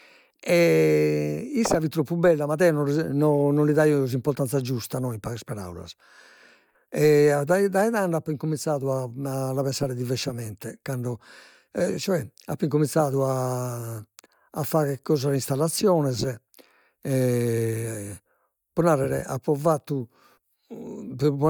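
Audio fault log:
No faults are heard anywhere in this speech recording. Nothing in the sound calls for a time or range to be logged.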